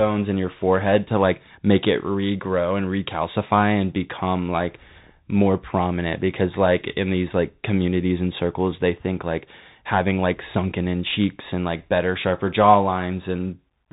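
A short speech recording that has gone through the Bluetooth CVSD headset codec for its whole length, and you can plainly hear it. Nothing gets through above about 3.8 kHz, so it's boxed into that narrow phone-call band. CVSD sends a single up-or-down bit per sample with a step that keeps adapting, which fits a 64 kbps link. Loud bright sounds outrun that step and distort, s sounds come out scratchy, and a grainy hiss sits under the speech.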